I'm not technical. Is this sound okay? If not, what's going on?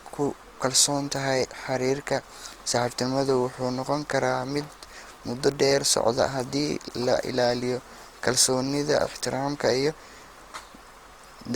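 No. Throughout the recording the speech sounds rough, grainy and noisy. That is likely Opus compression squeezing the sound hard: when data runs short it fills gaps with noise, so the voice keeps its full range but loses its clean texture.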